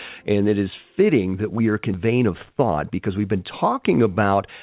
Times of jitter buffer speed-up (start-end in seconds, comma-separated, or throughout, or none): 2.53-3.09